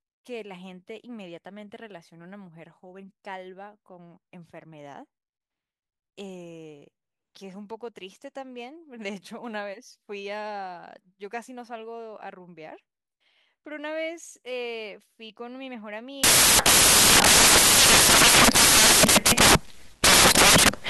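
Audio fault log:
16.24–20.90 s, samples built from the wrong bytes: for the last 4.7 s the speech gives way to loud, harsh broadband noise. Each sample is being assembled from misaligned or swapped bytes, so the rapidly fluctuating low-order bits land in the most significant position and dominate every value. On a waveform this appears as a dense, solid block; on a spectrogram, a flat wash across all frequencies.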